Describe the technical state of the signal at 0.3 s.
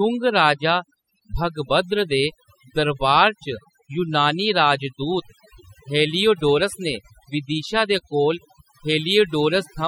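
At 0.3 s the speech is under overdone noise removal, which runs through the whole clip rather than starting or stopping there. The noise reduction was pushed too hard, so individual frequency bands sitting near its noise estimate are cut deep or switched off, taking quiet parts of the voice with them. The background drops and breaks up into twinkling specks. Unlike a noise gate, which mutes everything at once, this removes bands separately, leaving those isolated sparkles.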